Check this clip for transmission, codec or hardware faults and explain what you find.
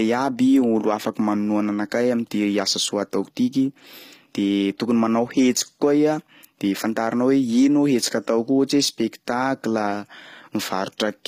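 One codec fault runs through the whole recording. HE-AAC compression, throughout: the treble is likely rebuilt by spectral band replication, copied upward from lower bands under a coarse envelope. The damage is plainly audible, which fits a low bitrate near 24 kbps. Sibilants sound gritty and metallic, and nothing sounds above 15.5 kHz.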